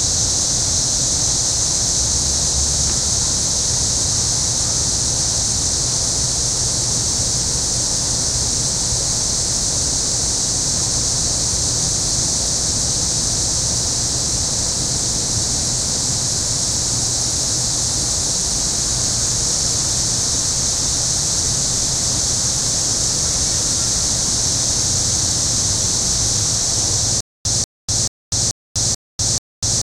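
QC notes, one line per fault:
27.20 s to end, stutter with silent gaps: a 188 ms burst repeats six times with 247 ms of silence between, likely a stalled stream replaying its last chunk.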